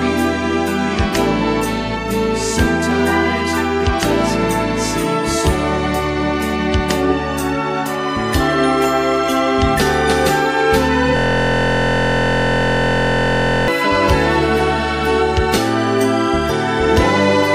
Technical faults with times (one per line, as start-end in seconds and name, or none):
11.17-13.68 system hang loop